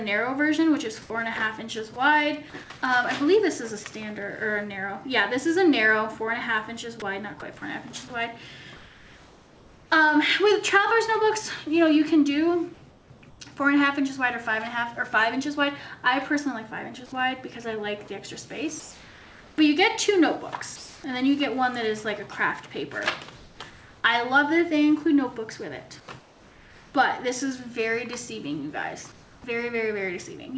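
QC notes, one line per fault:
1.02–1.10 s, 8.76–9.90 s, 12.74–13.40 s, 18.80–21.04 s, 23.36–24.04 s, 26.00–26.94 s, 29.12–29.44 s: comfort noise in place of the background. The real background gives way to flat, featureless hiss, about 1, 3 and 8 dB quieter at 1.02, 8.76 and 29.12 s. This is likely a sender pausing transmission while the receiver synthesises roughly matched noise.
7.00 s: sound dropped by the voice detector. About 20 ms of sound vanishes under steady synthetic noise and then returns. The likely cause is the sender's detector briefly judging real sound as background and halting transmission. The receiver filled the gap with comfort noise.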